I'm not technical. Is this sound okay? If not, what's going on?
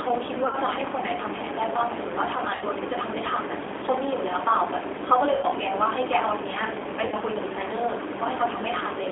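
No. G.729 codec, throughout: this low-rate phone codec rebuilds the speech from a rough model of the voice instead of sending the sound itself. Nothing outside about 300 Hz to 3.5 kHz survives, so it sounds thin, muffled and slightly robotic.

VoIP packet loss concealed by the speech codec, at 0.47, 2.55, 5.35 and 7.06 s: bits of the call went missing, about 60 ms each time and 80 ms at 5.35 s. The decoder filled each gap by stretching the last sound into a brief buzzy or noisy smear that fades, and the voice stays weak or distorted for a moment after the speech returns.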